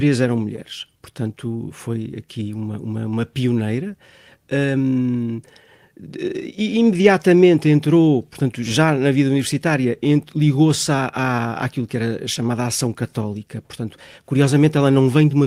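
A speech clip with clock drift between sender and receiver: the sender's clock runs about 2% slow, so the receiver's jitter buffer keeps draining throughout. Repeated timing corrections from 0.04 s to 15.32 s repeat short pieces to keep in step, at 98% speed and uneven spacing, adding roughly 0.3 s in all.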